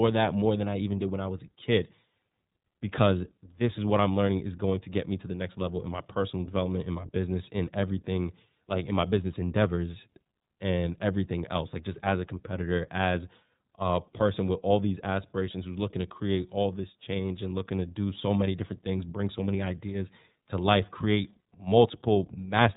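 A speech clip carried throughout by the iLBC codec, with plainly audible coding damage from start to finish. The band stops at about 3.8 kHz, so sibilants are dulled, upper harmonics are gone and the sound is thin and telephone-like. Because each frame's excitation is coded independently, the speech has a rough, slightly synthetic grain, which fits iLBC's 13.33 kbps mode with 30 ms frames.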